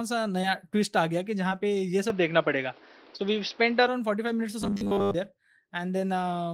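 Short concealed packet loss hits at 0.41 s and again at 1.49 s. Each time about 20 ms of the speech never arrived, and the receiver patched the gap by extending the preceding sound for roughly 16 ms before blending back into the real signal over the rest of a span of about 40 ms. Each sounds like a tiny smear or wobble. On a waveform the cycles just before the gap repeat almost unchanged, and a spectrogram shows a short stretch of frozen harmonics or smoothed noise.

From 2.10 s to 3.88 s the tone turns duller and boxier with no gap at the change, most likely because the input switched to a poorer device. The band narrows, so the spectrogram's upper band thins out. The level shifts by about 5 dB, and a new noise floor appears around 30 dB below the speech. Inside this stretch, at 3.17 s, a third short concealed packet loss replaces 20 ms with about 20 ms of extrapolated sound.

From 4.60 s to 5.14 s the speech becomes a rigid metallic buzz at 100 Hz. 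This is likely robotic sound from repeated short buffers: a 10 ms block is replayed again and again, covering most of that stretch, while the real audio is skipped. The waveform shows identical 10 ms cycles, and the spectrogram shows evenly spaced horizontal lines at multiples of 100 Hz.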